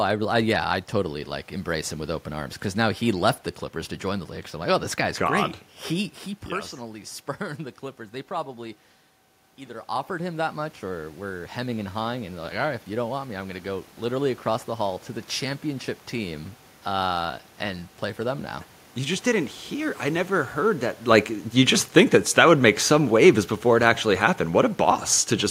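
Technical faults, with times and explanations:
21.07–25.09 s, automatic gain falling: just after "I never heard that", the whole level eases down by about 3 dB over four seconds, the room noise sinking with it. The automatic gain control judged the input too loud or its background noise too strong and gradually turned its gain down.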